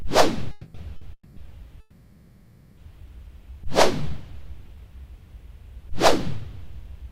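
Packets were likely held up in transit, letting the jitter buffer run dry, which produced a call audio freeze at 0.51 s. The last sound carries on for about 230 ms as a fading buzz, then the audio resumes where it stopped, delayed but complete. At 0.96 s a single late packet causes a short stall. The receiver stretches the current sound for 50 ms before picking up again, leaving a brief held, slightly buzzy spot. Another freeze follows at 1.13 s. It again fills 230 ms, with the smear fading to about 50 ms of silence before the audio continues. The longest freeze runs from 1.80 to 2.79 s. For nearly a second the last sound hangs on as a decaying buzz, and then the audio picks up without loss, now running about 1.5 s behind.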